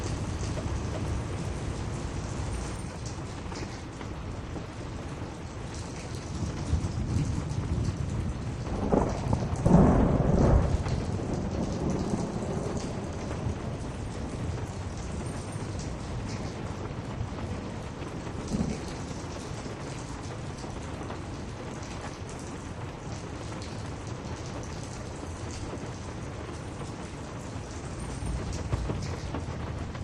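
The audio opens with a doubled audio track already under way, ending abruptly at 2.76 s. A second full-band copy trails roughly 400 ms behind at about equal loudness, with no decay or room colour. The likely cause is a slower second capture path.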